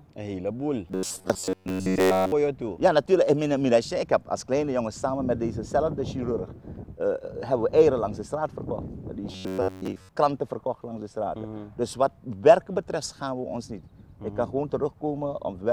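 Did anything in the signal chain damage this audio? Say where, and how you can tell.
Yes. From 0.88 to 2.33 s, and again from 9.32 to 10.09 s, the sound collapses into a rigid, metallic buzz fixed at 93.8 Hz that only loosely follows the underlying audio. This is robotic sound from repeated short buffers, likely from a starved driver or buffer stage. With new data arriving too seldom, it replays a chunk of about 10.7 ms again and again, skipping most of the real audio. That repeat period is what imposes the fixed pitch.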